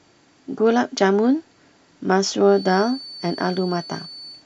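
A likely loudspeaker-to-microphone loop holding right at the feedback point puts a feedback whistle on this speech clip from 2.44 s to the end: a thin, steady 4.5 kHz tone roughly 20 dB below the speech.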